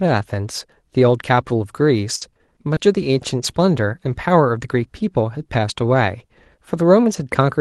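From 2.15 to 2.79 s, repeated packet loss breaks up the speech. Five short holes appear, the longest 60 ms, and about 140 ms goes missing in all. Each hole is patched by stretching the last sound, so this stretch turns choppy, with pieces missing.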